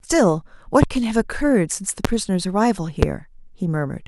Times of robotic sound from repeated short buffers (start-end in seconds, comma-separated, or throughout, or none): none